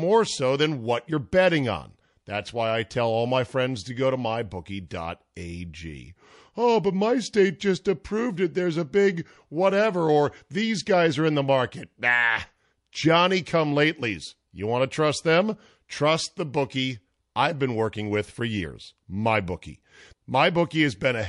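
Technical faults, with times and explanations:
Throughout: MP3 compression. The sound is watery and swirly, with a dull top end and plainly audible damage. The likely cause is a low-bitrate MP3 encode, and the sound fits a rate around 48 kbps. With so few bits, the encoder cuts the treble at a fixed point. It also drops weak frequency lines, which flicker on and off between frames. That flicker causes the swirl and the metallic chirps on bright, hissy sounds. Sharp attacks lose their edge and smear.
4.88 to 4.91 s: pre-echo. A short burst of hiss, about 31 ms long, comes just before a sharp attack. The noise rises about 13 dB above the quiet part it lands in. The codec spread its error evenly across a block of about 48 ms. The attack fell late in that block, so noise scaled to the loud part leaked into the silence before it. The smearing points to the encoder keeping long blocks instead of switching to short ones. 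The attack itself sounds softened.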